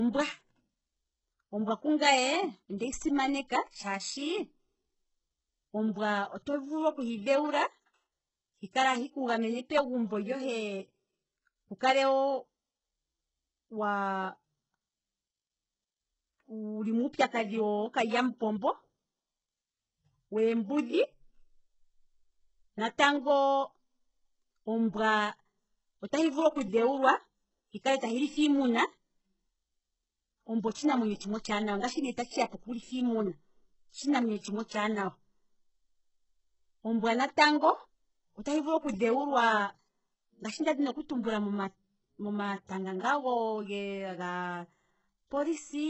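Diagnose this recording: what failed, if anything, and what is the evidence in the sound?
The fault sits at the codec stage and runs through the whole speech recording. Nothing is heard above 8 kHz. The treble that remains sounds synthetic, and s sounds come out gritty and lispy, with a metallic sheen. The damage is heavy from start to finish. The likely cause is HE-AAC compression at a very low rate, one that fits roughly 8 kbps. The coder keeps only the lower band and fakes the top by copying lower bands upward, so the upper harmonics never line up with the real ones.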